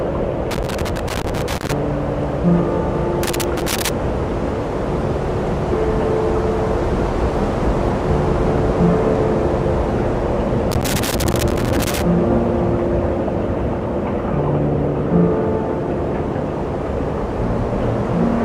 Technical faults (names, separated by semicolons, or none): loose connector crackle